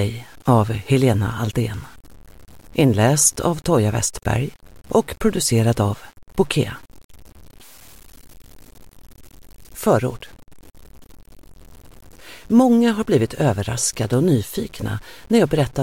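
The audio was likely truncated to very few bits without dither, which fits roughly 7-bit resolution, giving low bit depth without dither throughout. Quantisation error tracks the signal, leaving grainy distortion around 30 dB below it, with quiet passages turning gritty or sputtering.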